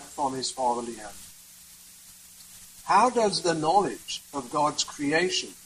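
Nothing goes wrong anywhere in this one; there's no technical fault to point to at any moment in the audio.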